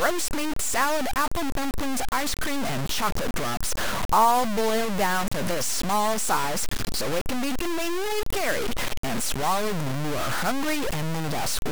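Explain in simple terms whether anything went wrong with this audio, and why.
The speech sounds gritty and crackly the whole way through, from the first second to the last, and the roughness is roughly as loud as the voice itself. It shifts with every syllable, and the softest moments break up or sputter. That is low bit depth without dither: the audio was likely stored with only 4 bits and simply chopped down to those few levels, so the rounding errors follow the speech and become harsh, grainy distortion.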